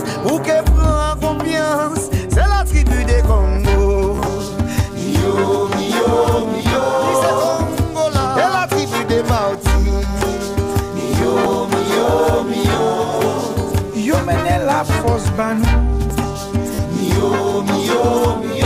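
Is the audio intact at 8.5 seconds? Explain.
Yes, at 8.5 seconds the audio plays through intact, with no dropout, glitch or other fault at that moment.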